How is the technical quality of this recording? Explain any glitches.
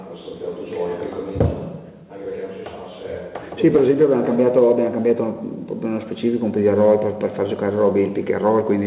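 No audible glitches or faults.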